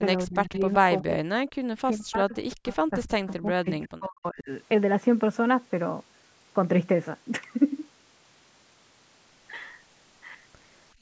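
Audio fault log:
0.17–0.62 s, 0.79–0.83 s, 1.02–4.5 s: speech suppressed in double talk. The speech dips by about 25 dB in the first stretch, about 30 dB in the brief second one, and about 40 dB in the long third one, where roughly three seconds are affected. The likely cause is an echo canceller that could not separate the local talker from loudspeaker echo while both sides spoke, so it pulled everything down. This differs from background gating because the speech itself is lost, not just the room sound between phrases.
0.53–0.74 s, 2.68–2.76 s, 3.3–3.34 s: echo leak. A faint, delayed copy of the far-end speech comes back about 370 ms late, sitting about 25 dB below the speech in the first two scraps and about 30 dB below in the last. This is likely residual loudspeaker sound that the far side's echo canceller failed to remove from its microphone. Unlike double-talk suppression, it adds sound rather than removing it, and the fixed 370 ms delay marks it as echo, not room reverberation.
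10.94–11.01 s: background gated by the echo canceller. In the final 70 ms, the room tone drops by about 21 dB. The canceller clamped the microphone hard while the loudspeaker played, and the clip ends before it releases. Here only the ambient bed vanishes. That separates it from double-talk suppression, and the absence of any delayed copy separates it from echo leak.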